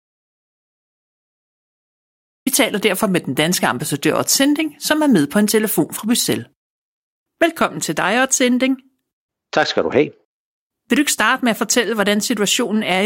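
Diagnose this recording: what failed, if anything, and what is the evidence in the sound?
The clip opens on an audio dropout to silence: dead silence from 0 to about 2.47 s, no room tone at all, then the speech starts abruptly at "taler derfor med den". That points to the input side, likely a lost device link or mute while the recorder kept writing.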